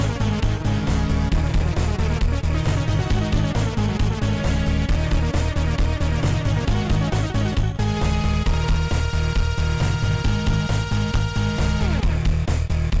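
Wrong sample rate throughout. The sound runs at 0.73 times speed and 5.55 semitones low. That fits 22 kHz audio played at 16 kHz without conversion.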